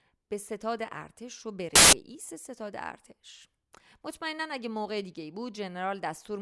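At 1.75 s the speech is replaced by a burst of very loud white noise that lasts until 1.93 s. This is file tags played as audio: an embedded cover picture's compressed bytes were decoded as samples. Its abrupt edges and flat, very loud hiss distinguish it from a dropout's silence.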